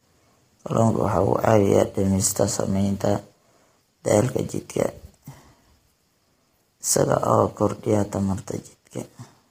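Throughout the speech, the audio was likely squeezed through low-delay AAC compression, with short frames that resolve pitch harmonics poorly at a rate that fits about 24 kbps. The damage is heavy: the voice sounds rough and grainy, with noise filling between harmonics and a dulled, synthetic top band.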